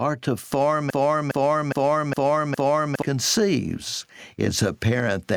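Gain pumping runs through the whole clip. The level swings by roughly 15 dB. This likely comes from input gain set far too high, with a fast limiter clamping down on peaks. Loud and soft passages sit squashed together.

From 0.90 s to 3.02 s there is a broken-record loop. A fragment of about 0.41 s plays five times, back to back, with identical repeats. The speech that belonged in those two seconds is gone. The player, encoder or stream likely stalled and kept resending its last buffered piece.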